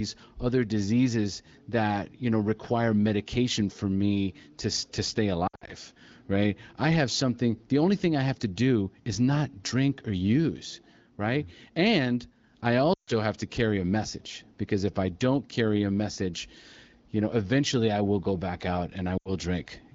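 Lost AMR speech frames occur at 5.47 to 5.70 s, 12.94 to 13.13 s and 19.18 to 19.33 s. Radio errors corrupted frames, so the wideband decoder filled each gap by reusing the last good pitch and vocal tract settings at falling gain. In the first event, about 140 ms of loss is scattered over 200 ms in short runs, giving repeated dips and warbles. The second also loses about 140 ms, and the third about 80 ms, each briefly interrupting the speech before it returns roughened.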